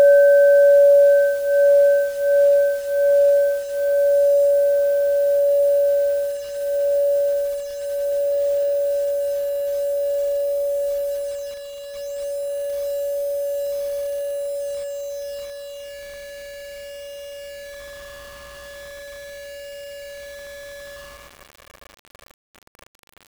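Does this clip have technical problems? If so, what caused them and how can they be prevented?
Yes. Low bit depth without dither runs throughout the clip: grainy distortion sits on the sound and changes with it, roughly 25 dB below the signal. Quiet passages turn gritty, and the softest parts sputter between steps or fall to silence. The likely cause is a reduction to about 6 bits by plain rounding, so the rounding error tracks the waveform instead of spreading into a steady hiss. To prevent it, keep at least 16 bits and apply dither whenever the word length is reduced.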